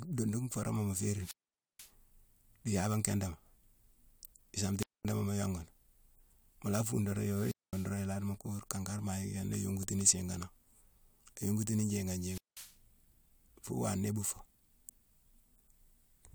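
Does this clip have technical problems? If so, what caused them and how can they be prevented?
Yes. The speech drops out four times with a wireless microphone squelch dropout: a short swell of hiss, then near silence, then the sound returning, at 1.16 to 1.91 s (about 0.48 s muted), 4.78 to 5.06 s just before "mu yongu" (0.22 s), 7.28 to 7.96 s (0.22 s), and 12.18 to 12.77 s just after "yongutini njiigane" (0.19 s). The radio link faded until the receiver's squelch gated the output. Keep the transmitter within clear line of sight and use diversity receivers on a clean frequency.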